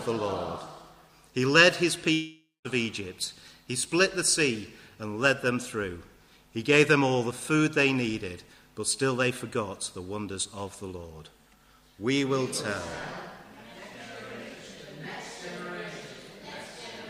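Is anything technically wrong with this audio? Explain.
Yes. There is a long network dropout from 2.13 to 2.67 s. Most likely, audio stopped arriving for about half a second, and 520 ms of the original sound was never played. The receiver filled the gap by continuing the last sound it had. That fill is heard as a buzz or hiss that fades away, leaving about 210 ms of silence. The audio then resumes, with the lost part missing.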